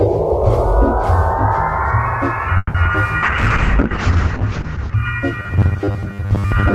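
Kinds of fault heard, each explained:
call audio freeze: Around 2.57 to 2.76 s the music stops moving forward and its last sound smears into a fading buzz, dropping to about 20 ms of silence before it picks up exactly where it left off. The likely cause is packets getting held up in transit so the jitter buffer ran dry. Nothing is lost, but roughly 170 ms of filler has been inserted, so everything after sits that much later.
short concealed packet loss: Two quick blips at 2.84 s and 2.93 s, each about 30 ms long. In both, a chunk of audio never reached the decoder in time, and the receiver papered over it with about 10 ms of extrapolated sound before blending back. The first skips 20 ms of real music and the second skips 40 ms, so you hear a brief smear or wobble with a tiny jump forward. The second also pulls the delay back by about 30 ms.
call bitrate drop: From 3.23 to 5.03 s the encoder gets squeezed from 32 kbps down to 7 kbps and sits at the bottom for about 1.7 s. 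At that rate Opus codes everything much more coarsely and narrows the band from 20 kHz to 8 kHz, so the music loses its top end and sounds muffled, watery and a bit rough. It recovers its brightness once the rate climbs back.
jitter buffer slow-down: Between 3.89 and 4.97 s the receiver stretches the audio to rebuild its reserve, repeating tiny slices of the waveform over and over. Playback runs at about 96% speed with the pitch unchanged, so the music drags slightly and held sounds get drawn out, maybe with a faint warble. Across that second or so it adds 45 ms of extra material. This overlaps the bitrate drop, so both effects stack in that stretch.
robotic sound from repeated short buffers: From 5.33 s to the end the music turns into a rigid, metallic 100 Hz buzz that only loosely follows what's underneath. The likely cause is new audio arriving too rarely, so the software keeps looping its last short buffer while the real audio gets skipped. 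A 100 Hz buzz fits a loop of about 10 ms. Most of this final stretch is repeated material rather than the actual music.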